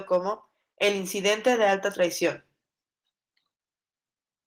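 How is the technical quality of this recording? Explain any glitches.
The recording has one technical fault, a brief moment of hard clipping near the start. The light, full-band Opus voice compression carries the speech with content reaching about 20 kHz.

From 0.13 to 0.17 s, peaks exceed what the signal chain can pass by about 2 dB, so they are sheared flat. That shows as squared-off waveform tops and a faint vertical smear of high harmonics on a spectrogram, heard as a short crackle.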